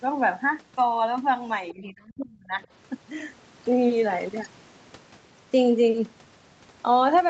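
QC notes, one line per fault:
1.70–1.74 s, other side's voice leaking through: a brief, faint scrap of a second voice sits underneath the main speech, roughly 25 dB below it. This is likely residual echo. The far end was playing on the talker's loudspeaker and reaching the microphone, and the echo canceller did not fully subtract it. A short burst like this points to a momentary lapse in the cancellation rather than a sustained leak.
1.73–2.58 s, speech suppressed in double talk: right as the leaked voice appears, the talker's level is pulled down. At its deepest it falls by around 35 dB, and the gating adds up to roughly a second in all. The likely cause is the echo canceller meeting both sides talking at once. Unable to separate near speech from loudspeaker echo, it attenuated everything, so the talker is turned down across this stretch, within the 8 kHz bandwidth of the call path.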